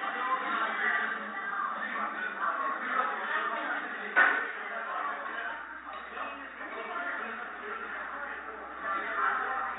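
No audible technical faults.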